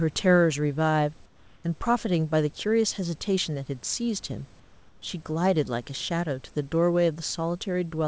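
From 1.26 to 1.64 s and again from 4.60 to 5.02 s, the pauses between speech carry comfort noise in place of the background, likely from discontinuous transmission. The room's textured background gives way to a flat, smooth noise about 2 dB and then about 4 dB quieter. On a spectrogram these 380 ms and 420 ms stretches look uniform and grainless below the 8 kHz ceiling. The waveform shows a steady, slightly lower floor.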